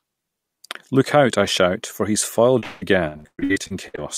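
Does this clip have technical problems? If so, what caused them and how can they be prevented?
Yes. Repeated packet loss, robotic sound, runs from 2.59 to 3.99 s after "I shout for he's": a dozen gaps, longest 180 ms, are patched with repeated sound, visible as smeared, stuttering spectrogram blocks. A steadier network connection with adequate jitter buffering or forward error correction would prevent it.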